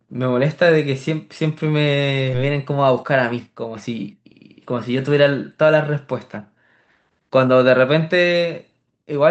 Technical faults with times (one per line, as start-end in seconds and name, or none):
2.33-2.35 skip ahead
2.43-4.32 jitter buffer speed-up